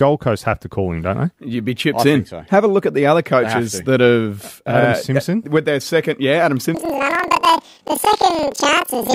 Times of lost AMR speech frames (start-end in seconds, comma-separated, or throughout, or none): none